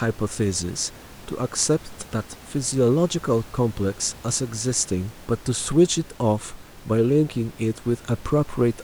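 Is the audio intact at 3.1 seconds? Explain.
Yes, the audio is intact at 3.1 seconds, with only the room noise sitting about 22 dB below the speech.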